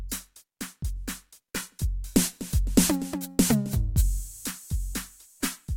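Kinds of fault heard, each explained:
Sample clock jitter: the converter's clock wanders, so each sample is taken slightly early or late, by something on the order of a microsecond or two. The error grows with how fast the waveform is changing, so the music carries a grainy hiss about 30 dB beneath it. It is strongest on loud, bright passages and absent in silence. A spectrogram shows a broadband noise floor that swells with high-frequency content, while the waveform shows no visible damage.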